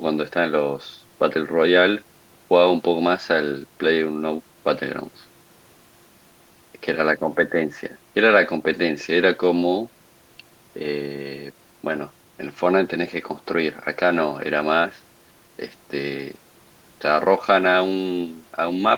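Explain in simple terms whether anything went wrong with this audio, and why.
Nothing went wrong here: the speech comes across steadily the whole way, with no glitches, gaps or odd sounds to point to.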